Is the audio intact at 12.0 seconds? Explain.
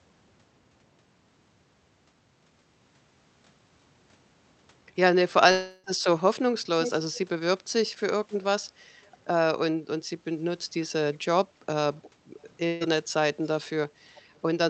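No. From 11.94 to 12.1 s a faint echo leak appears, a delayed copy about 353 ms late and well below the speech, likely from a far-end loudspeaker the echo canceller missed. Its fixed lag marks it apart from smooth room reverb.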